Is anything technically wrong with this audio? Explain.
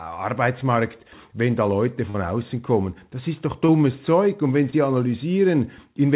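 Yes. There are three short concealed packet losses, at 2.10 to 2.16 s just before "außen kommen", at 3.66 to 3.70 s just after "ist doch", and at 4.70 to 4.74 s. Each gap is roughly 20 to 40 ms of audio that arrived too late. The receiver stretched the preceding sound to cover it, then crossfaded back, which produces a brief smear or wobble. On a spectrogram, each gap shows as a sliver where the preceding sound is held. The narrowband call path leaves nothing above 4 kHz throughout.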